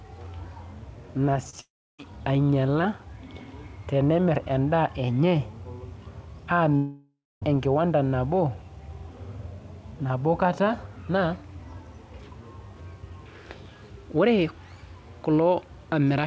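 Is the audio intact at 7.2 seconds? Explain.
No, a likely long network dropout runs from 6.76 to 7.43 s. With packets missing, the receiver stretches the last sound into a fading buzz, leaving about 0.24 s of silence before the audio resumes at "enkiwanda nabo", with roughly 0.66 s of speech lost.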